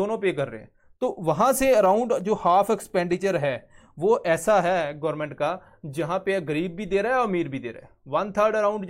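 From 2.21 to 3.82 s, eight CD scratch ticks, each no longer than a few milliseconds, recur at a steady rate of about four to five per second as a blemish defeats error correction on each disc rotation. That regularity distinguishes them from the random clicks of vinyl.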